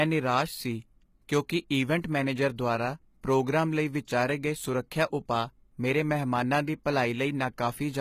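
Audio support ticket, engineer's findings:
Speech, full length. Treble extended but synthetic. Sibilants gritty, metallic, lispy. Nothing above 14.9 kHz. Likely HE-AAC compression at a bitrate around 20 kbps. Upper band rebuilt from copied lower bands, so harmonics misalign across the crossover.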